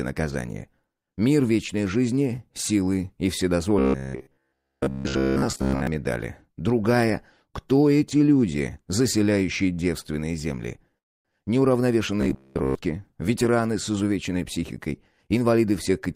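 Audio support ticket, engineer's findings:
Robotic sound from repeated short buffers, 3.79–5.87 s and 12.21–12.75 s. Rigid metallic buzz at 66.7 Hz. Likely starved playback buffer looping the last 15 ms block, with most of the real audio skipped. Contour follows the sound only roughly.

Short stall from a late packet, 9.73–9.80 s. Sound held 34 ms too long. Jitter buffer ran dry, the receiver stretched the last frame until the packet arrived, and playback resumed in place. Nothing lost, and delay increased by 34 ms.

Call audio freeze, 10.98–11.28 s. Gap of 268 ms, mostly silent for 260 ms. Likely packets delayed in transit and the jitter buffer empty, so the receiver filled briefly and then went quiet. Playback resumed where it stopped, nothing missing, and delay increased by 268 ms.

Jitter buffer speed-up, 14.58–16.01 s. Playback runs at 108% speed with unchanged pitch and sounds hurried. 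Receiver trimmed pitch-period-length pieces repeatedly to shed excess buffered delay, removing about a tenth of a second in total.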